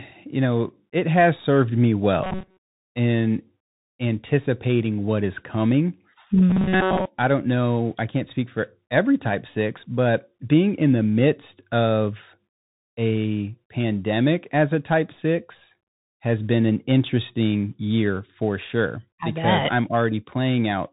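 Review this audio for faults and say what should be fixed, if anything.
The whole clip runs through the Bluetooth CVSD headset codec, and the damage is plain: nothing above 3.8 kHz survives. Its one-bit up/down tracking at 64 kbps can't keep pace with loud high content, so s sounds come out scratchy over a grainy hiss. Recording through a wired or wideband mic path would avoid it.

There are two stretches of robotic sound, from 2.24 to 2.80 s, right after "it has served me" and before "in anticipating what is", and from 6.50 to 7.06 s, after "anticipating what is coming" and before "I don't know I". Both have a rigid metallic buzz at 188 Hz, and most of the audio there is repeated rather than new. The likely cause is the software looping a short buffer of about 5 ms while real audio went missing. Giving the capture chain bigger buffers or more CPU headroom should stop it.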